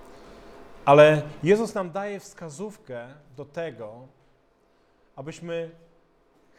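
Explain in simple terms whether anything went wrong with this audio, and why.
Zipper noise appears from 1.4 to 1.92 s. The sound gets quieter there, but in small jumps, about twenty a second, rather than one smooth slide. Each jump makes a tiny click, so you hear a fast ticking as the level drops.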